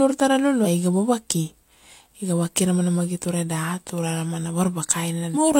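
Right after "ta ra", from 0.62 to 0.67 s, there's a quick glitch before "iga vavaki", and another at 5.31 to 5.36 s. Both are damaged data in the compressed stream: corrupted frames throw the decoder off sync until it finds the next valid header.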